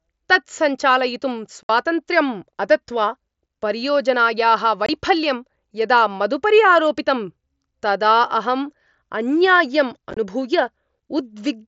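Speech carried over a wideband mSBC Bluetooth headset link. Unconcealed Bluetooth headset packet loss leaves abrupt holes: 60 ms at 1.63 s, 22.5 ms at 4.86 s after "अदत्वा परियोजनायाः", and scattered gaps across 60 ms at 10.11 s after "तदा अहम् अन्याय्यम्".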